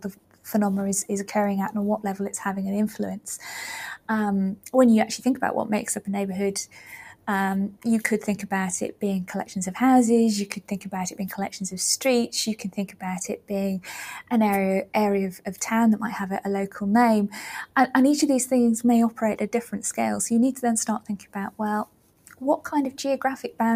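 Noise suppressor applied to music or sounds, running from start to finish: a processor tuned for speech keeps misreading sustained parts of the sound as background noise. Its gain rises and falls by roughly 5 dB as it decides what to keep, so held material and decaying tails sink while onsets pass more intact. The result is a pumping and a thinned, fluttering body to the sound.

Sound cut by the noise suppressor, at 0.0 to 0.45 s, 21.0 to 21.35 s and 21.86 to 22.36 s: in these spans the suppressor classes the sound itself as noise and pulls it down hard, as much as about 12 dB at the deepest point. Each dip lasts a few hundred milliseconds. Sustained and fading portions drop away or have their decay clipped, while any sharp onsets inside the spans survive better.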